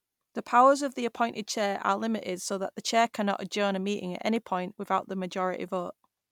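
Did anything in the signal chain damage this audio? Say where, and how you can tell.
No, nothing in the signal chain audibly damaged this speech recording. Listening through, I couldn't point to any stage as a source of trouble.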